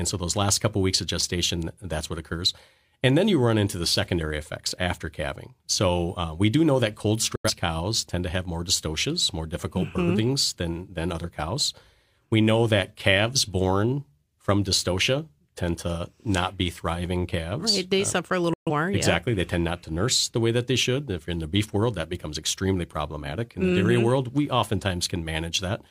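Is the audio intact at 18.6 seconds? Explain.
No. At 18.6 seconds the speech is inside a digital broadcast dropout running from 18.54 to 18.70 s. The receiver stopped getting usable frames, either because the signal was lost or because frames failed their checksum, and it muted until valid data resumed. The sound fades out in about 3 ms and leaves a short silent hole of roughly 130 ms of missing programme, which fits about three lost frames. What was transmitted during that gap is gone.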